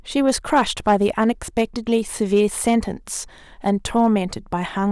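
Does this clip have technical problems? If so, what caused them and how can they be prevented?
Yes. Throughout this speech clip, the loudest peaks crackle with a brief harsh edge: hard clipping. The signal was driven about 5 dB beyond what a stage could pass, so about 0.5% of samples were sliced flat, adding high harmonics. Prevent it by lowering gain before that stage.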